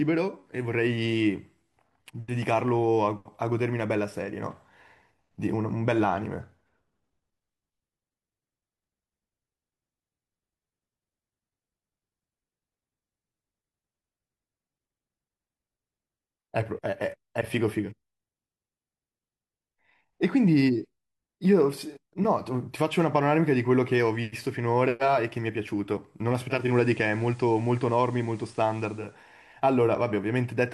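At 26.47 s, digital radio blending to analogue FM takes 0.32 s. Faint hiss appears. The analogue sound lasts until 29.20 s.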